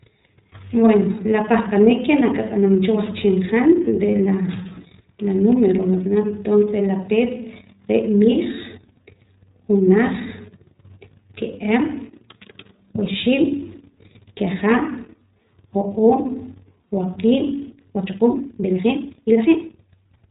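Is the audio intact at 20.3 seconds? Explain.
No. The speech passed through the iLBC codec, which codes each frame's excitation independently in a narrowband mode consistent with its 30 ms, roughly 13.3 kbps setting. At 20.3 s, as throughout, nothing above 4 kHz survives, and the speech sounds plainly rough and synthetic.

A time-stretched section also runs from 17.68 s to the clip's end at 20.30 s. It was likely produced by software squeezing the audio to fit a length, dropping short pieces while holding pitch. Here the pace jumps to about 1.65 times normal, so the speech sounds rushed at unchanged pitch.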